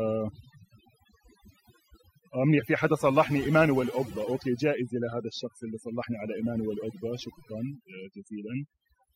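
A speech recording with overdone noise removal running through the whole clip: the background drops and breaks up into twinkling specks. Unlike a noise gate, which mutes everything at once between phrases, this suppression strips individual frequency bands, so quiet parts of the voice vanish even mid-phrase.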